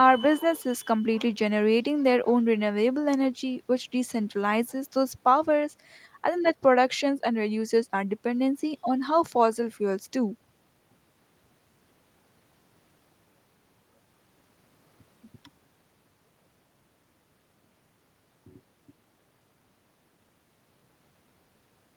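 No technical faults occur at any point in the recording.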